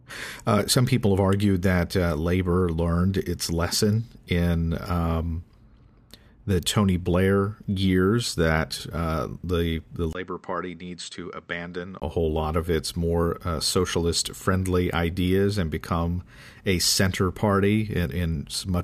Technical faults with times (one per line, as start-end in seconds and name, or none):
10.13-12.02 input switched to a poorer device